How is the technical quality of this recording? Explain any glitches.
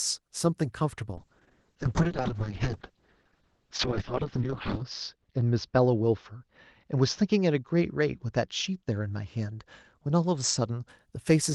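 The recording has one clear glitch, a call bitrate drop, which degrades most of the speech.

Call bitrate drop, 1.19 to 10.93 s: the call's bandwidth estimate fell and starved the encoder of bits, which fits a drop from about 32 to 6 kbps. Coding turned coarse and the top of the band fell from 12 kHz to 8 kHz, so speech sounds rough and muffled, worst for about 3.6 s.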